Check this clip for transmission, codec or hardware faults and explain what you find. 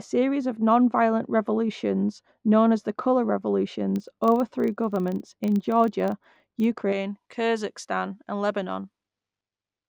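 Two faults are audible in this speech clip, and they overlap in the middle section.

From 0.0 to 6.92 s, de-emphasis has been applied wrongly: a treble-cut stage meant to reverse pre-emphasis was applied to audio without it, or applied twice. Highs fall smoothly to about 11 dB down at 10 kHz relative to 1 kHz, so the speech sounds dull and muffled. A spectrogram shows the upper bands progressively faded, with no sharp cutoff.

From 3.96 to 6.70 s, a filter is restarted on every block. It loses its state at each block boundary and starts from silence, leaving a small transient every time. The result is a 25 Hz buzz, which fits blocks of about 40 ms, and it grows louder and quieter with the speech. The waveform shows evenly spaced tiny spikes, and a spectrogram shows faint vertical lines at that rate.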